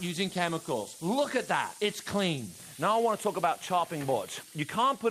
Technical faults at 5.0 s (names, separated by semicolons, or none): none